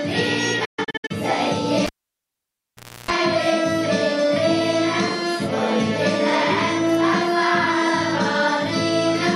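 From 0.65 to 1.11 s there is a digital broadcast dropout: the receiver stopped getting frames it could decode, or frames failed their checksum, so it muted until clean ones arrived again. The audio drops out in several short holes across about 450 ms, roughly 290 ms lost in total, which fits around nine discarded frames. The longest gap is about 130 ms, each edge fading over 8 ms rather than clicking.

From 1.86 to 3.11 s the cable is pulled and plugged in while live. Breaking the connection gives a pop, and the line then sits near silent for about 1.2 s. As the plug goes back in, only the tip makes contact at first, leaving the input unshielded, so about 310 ms of 60 Hz mains buzz comes through before a second pop as the full connection and the sound return.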